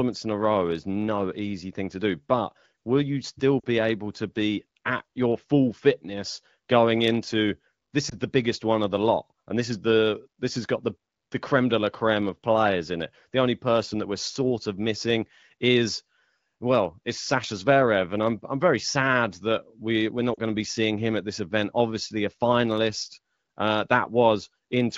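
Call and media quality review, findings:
Lost AMR speech frames at 3.60–3.65 s (after "but will you still", before "able to be at"), 8.09–8.14 s (after "fitness going into this"), and 20.33–20.40 s (after "sad that we we're"). Short dips with a smeared, warbly tail, about 40, 20 and 40 ms, so one or two 20 ms frames each. Radio-side errors failed the checksums, and the decoder stretched the last good pitch and vocal tract settings with falling gain. Wideband audio around them sounds clear, which fits a higher AMR-WB mode.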